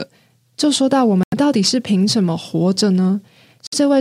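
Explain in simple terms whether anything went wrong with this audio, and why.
The speech drops to brief silence twice, at 1.23 to 1.34 s and at 3.67 to 3.74 s, then resumes. These are Bluetooth stalls, likely caused by wireless interference delaying audio packets, so the headphones ran out of sound until the resent data arrived.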